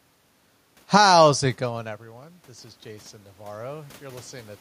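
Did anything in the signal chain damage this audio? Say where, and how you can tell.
Yes. In the call processing stage, automatic gain rising runs from 1.2 to 4.56 s. After the level drops by about 16 dB near 1.5 s, as the talker moves back, the control slowly adds about 9 dB. The waveform envelope and the room-noise floor on the spectrogram brighten together.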